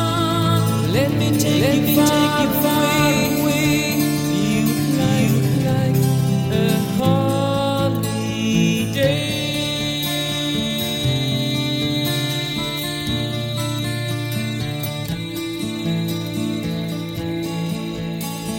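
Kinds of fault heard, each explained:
Doubled audio track: a second, equally loud copy trails the sound by roughly 0.7 s, likely from a duplicated capture path, present from the start until it stops abruptly at 7.0 s.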